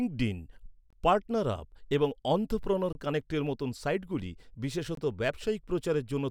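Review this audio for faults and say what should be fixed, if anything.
Gaps between chunks appear at 0.90, 2.93 and 4.95 s, each a hard-edged 23 ms hole. The waveform drops to flat silence and the spectrogram shows clean vertical blank stripes. The 2 s spacing points to chunks joined with late starts or padding. To fix this, buffer and concatenate the chunks sample-exactly, trimming any codec padding before playback.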